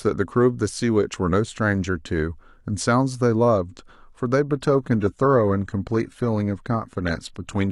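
An adaptive stream at a lower bitrate takes over from 4.56 s to the end of the clip. The connection slowed, so the player moved from a full-rate version to a much leaner one. The sound points to a change from AAC-LC at roughly 96 kbit/s to HE-AAC at roughly 20 kbit/s. In that second stretch, codec artefacts become audible in the speech. The change is sudden, with no gap in the audio.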